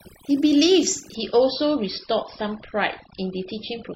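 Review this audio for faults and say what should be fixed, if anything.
Overdone noise removal runs through the whole clip. Bands near the estimated noise floor are pulled down or switched off, so the background drops and breaks up into twinkling specks. Unlike plain low-bitrate coding, the artefacts track the noise floor, not the bandwidth. Set the reduction strength lower and check the result by ear.

An adaptive stream at a lower bitrate takes over abruptly at 1.15 s and lasts to the end, with no gap at the switch. Nothing remains above 5.6 kHz, and codec artefacts rise, which fits a drop from around 128 to about 24 kbit/s MP3. Unlike a dropout, the sound continues while only its quality falls. Cap quality switching or buffer more so that the higher-bitrate version holds.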